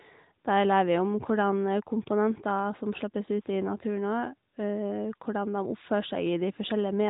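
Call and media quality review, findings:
No faults found in this call and media quality review; the speech runs over an AMR-NB narrowband path at 12.2 kbps, with the expected 4 kHz bandwidth ceiling and only light coding texture.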